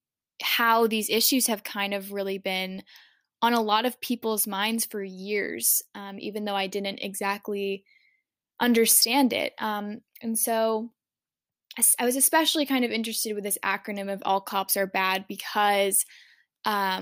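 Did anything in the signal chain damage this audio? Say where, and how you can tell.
No, nothing in the signal chain shows any damage here, and the speech signal is continuous and intact at every stage from capture to playback.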